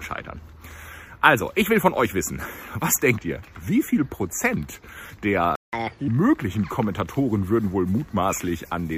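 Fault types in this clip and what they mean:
Playback stall: At 5.56 s the sound just drops out mid-flow and stays silent for about 175 ms before picking up again at 5.73 s. It's most likely the player running dry on buffered data or its thread getting blocked for that moment.
Catch-up at higher speed: Right after the gap, from 5.73 to 6.08 s, the player races through its backlog at 1.5 times normal speed. Resampling pushes the pitch up by roughly seven semitones, then everything snaps back to normal once the lost time is recovered.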